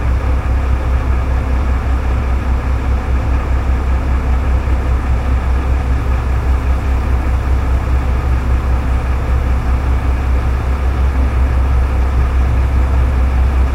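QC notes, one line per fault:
No faults heard in this audio; nothing to log.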